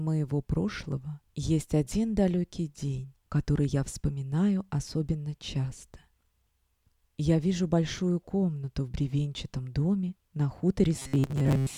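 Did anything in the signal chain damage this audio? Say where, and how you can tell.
Yes: robotic sound from repeated short buffers, from 10.99 s to 11.77 s. A rigid 133 Hz buzz appears, which fits a 7.5 ms buffer being replayed. The likely cause is a starved driver or buffer stage, so most of the real audio there is skipped.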